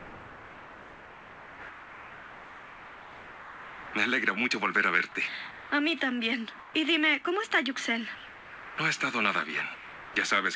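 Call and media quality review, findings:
Sound dropped by the voice detector, likely a sender-side VAD/DTX misclassification: real sound judged as background, transmission halted, receiver filling with steady comfort noise. Content gives way to flat noise at 0.00–3.93 s (about 2.2 s lost), 5.51–5.72 s, 8.15–8.78 s, 9.74–10.16 s.

Comfort noise in place of the background at 6.59–6.74 s, likely from DTX pause with receiver-synthesised noise. Real background detail replaced by featureless hiss, about 3 dB quieter, abrupt texture change. Band above 8 kHz absent throughout, consistent with a wideband call codec.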